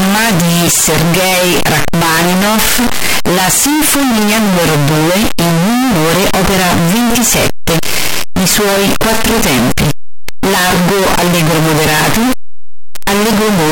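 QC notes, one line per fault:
Throughout, signed and unsigned mixed up: soft sounds as loud as strong speech, harsh distortion, likely 8-bit samples misread; waveform jumps rail to rail, spectrogram smeared broadband.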